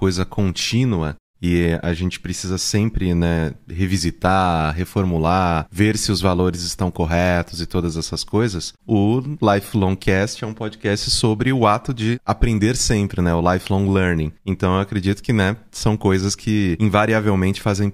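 Nothing goes wrong anywhere in this stretch of speech, so there's no fault to point to at any moment.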